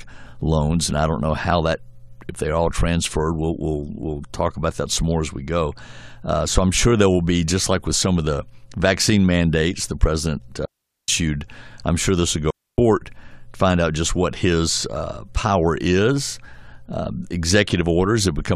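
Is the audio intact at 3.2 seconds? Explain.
Yes, the speech at 3.2 seconds is intact, with no dropout, click, distortion or other fault at that moment.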